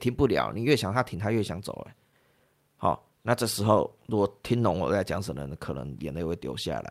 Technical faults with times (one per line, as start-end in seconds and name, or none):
0.00-6.90 clock drift between sender and receiver
0.07-6.20 repeated timing corrections